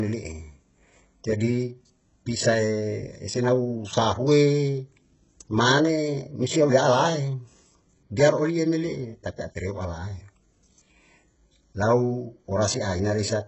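Across the whole speech clip, the treble has the synthetic quality of heavy HE-AAC compression, likely at a very low bitrate of around 8 kbps. Upper bands are rebuilt from copied lower content, so s sounds turn gritty and metallic, and nothing reaches above 8 kHz.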